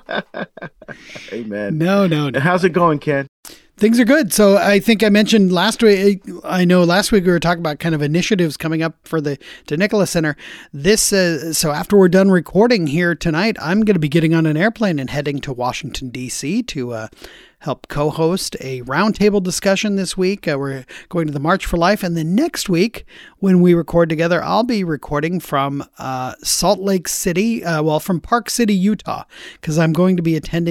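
Nothing stood out as a technical fault on listening to this speech recording.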